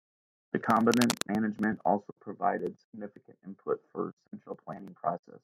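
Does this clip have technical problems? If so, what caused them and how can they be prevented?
Yes. From 0.85 to 1.23 s, just before "management also provided significant", scratchy rustling bursts sit only slightly below the speech: cable scratch noise, likely from a worn cable or connector shifting. Prevent it by replacing worn leads and securing cables so they don't move during recording.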